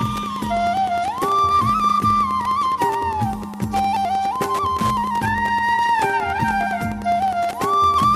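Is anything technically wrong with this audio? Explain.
Yes. Wi-Fi interference runs through the whole clip. A nearby Wi-Fi radio's beacon, sent every 102.4 ms, is picked up and rectified by the audio circuit. The result is a steady ticking almost ten times a second, roughly 20 dB below the sound.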